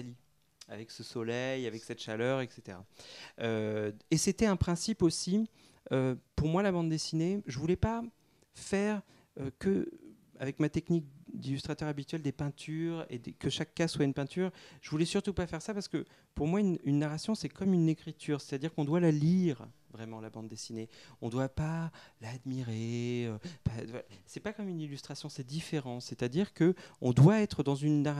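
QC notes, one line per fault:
No faults heard; nothing to log.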